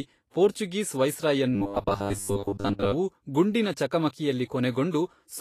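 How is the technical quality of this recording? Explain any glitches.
The speech has two audible problems: a grainy coding texture throughout, and a stretch where it turns mechanical and buzzy.

Throughout the clip the treble sounds hissy and grainy, tones come out roughened and attacks are smeared, and the damage is plainly audible. Vorbis compression is the likely cause. At a low setting, consistent with roughly 35 kbps, it coarsely quantises the residue above its spectral floor, so fine high-frequency detail turns into noise.

From 1.55 to 2.92 s the speech becomes a rigid, metallic buzz at 100 Hz that follows the original only loosely. The likely cause is robotic sound from repeated short buffers. Audio arrives too seldom, so a 10 ms slice keeps being replayed, filling most of that stretch while real audio is skipped.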